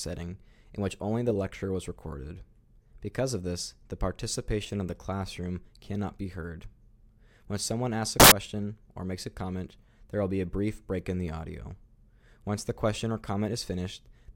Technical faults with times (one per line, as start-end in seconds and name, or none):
8.20-8.32 samples built from the wrong bytes